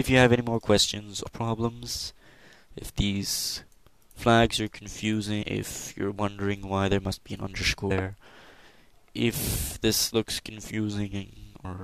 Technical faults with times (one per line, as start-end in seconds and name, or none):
1.26 damaged data in a compressed stream
5.41-5.43 damaged data in a compressed stream
7.90 damaged data in a compressed stream
11.64 damaged data in a compressed stream